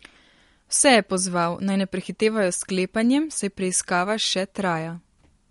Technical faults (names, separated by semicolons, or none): MP3 compression